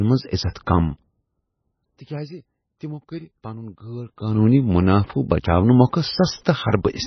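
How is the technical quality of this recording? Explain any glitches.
The recording has clear technical problems: the whole clip carries heavy codec damage, and one attack near the start is smeared by pre-echo.

Throughout the clip, the likely cause is MP3 compression at a very low bitrate. The damage fits a rate of around 17 kbps. With so few bits, the encoder discards weaker frequency components, and they flicker in and out from frame to frame. Nothing survives above 6 kHz. The speech sounds watery and swirly, s sounds turn metallic or chirpy, and attacks lose their edge.

From 0.51 to 0.55 s there is pre-echo. The codec spread quantisation noise across its whole block, including the quiet stretch before a sharp onset, so noise sized for the loud part arrives about 47 ms early. It is heard as a brief hiss just ahead of the attack, which itself sounds soft and smeared rather than crisp.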